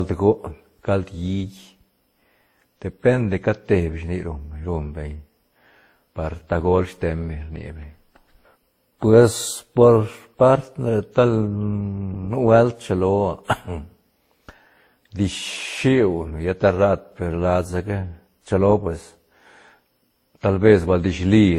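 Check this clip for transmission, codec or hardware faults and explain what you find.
The speech carries a codec fault throughout, most likely transcoding between lossy codecs. From start to end nothing appears above 16.6 kHz, and the artefacts of several codecs sound layered, heard together. Each later encoder spent bits reproducing the earlier codec's damage and added its own, which points to a chain something like WMA, then Opus, then Vorbis. On a spectrogram the top stops flat at 16.6 kHz, with patchy, blocky energy below it.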